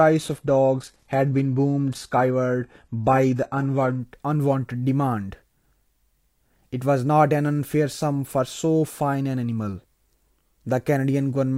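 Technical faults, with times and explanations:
0.0 to 4.0 s, adaptive stream starting at a low bitrate: the speech opens with synthetic-sounding treble, nothing above 12.3 kHz and heavier codec artefacts, which fits a roughly 16 kbit/s starting version. Once the connection was measured, the player switched to a better version around 96 kbit/s, and quality jumps abruptly without a gap.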